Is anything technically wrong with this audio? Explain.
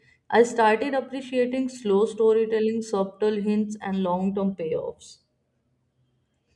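No, nothing is technically wrong with this audio.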